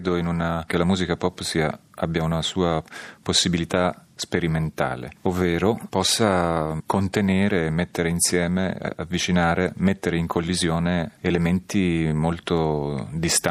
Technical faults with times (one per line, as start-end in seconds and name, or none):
none